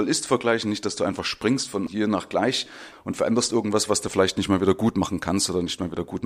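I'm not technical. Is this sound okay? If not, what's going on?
Yes, this sound is okay, and nothing is going wrong with it.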